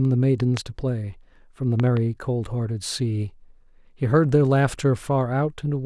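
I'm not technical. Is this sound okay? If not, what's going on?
No. The speech has a loud pop, a sharp thump laid on top of it, at 0.57 to 0.59 s, and a pair of quicker pops between 1.80 and 1.99 s. The first is the louder. These likely come from a sudden electrical jolt, such as a plug, a switch or static. Unlike a dropout, where the sound briefly vanishes, the speech carries on underneath each pop without a gap.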